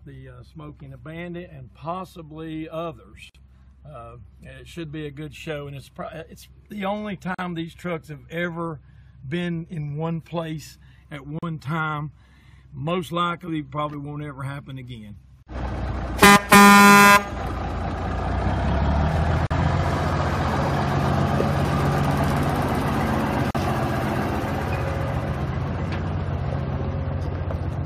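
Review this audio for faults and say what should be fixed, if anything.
There's a gap at a join of encoded pieces every 4 s: 3.30, 7.35, 11.39, 15.43, 19.47 and 23.51 s. The first is 50 ms and the rest are 40 ms, because each piece's leading encoder delay and padded last frame were left in. Fix it by encoding the whole thing in one pass, or by trimming the delay and padding (gapless handling) when you join the pieces.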